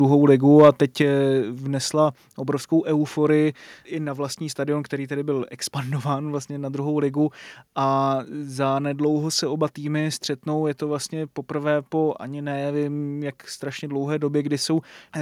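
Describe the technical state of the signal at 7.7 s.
At 7.7 s the speech signal is intact, with no audible fault at that moment.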